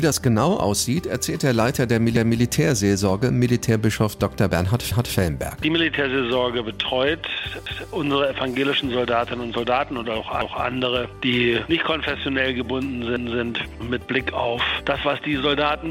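A short stutter, a quarter-second of sound heard twice, recurs at 2.16, 4.91, 7.66, 10.41 and 13.16 s, each lasting 250 ms. These are overlapping chunks: the audio was handled in 2.5 s blocks, but each new block began 250 ms before the previous one finished, so that stretch plays twice at every join. This gives the steady 2.75 s rhythm of the repeats.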